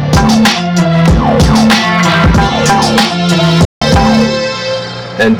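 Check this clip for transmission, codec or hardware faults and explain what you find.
Two faults are present: constant overload distortion and one brief silent gap.

Hard clipping runs throughout: driven about 12 dB past full scale, around a tenth of samples hit the ceiling, flattening waveform peaks and spraying harmonics high up the spectrogram as harsh fuzz.

From 3.65 to 3.82 s, a roughly 160 ms hole appears, likely a Bluetooth dropout from late packets: the waveform flatlines, the spectrogram shows a blank vertical band, then sound resumes further along.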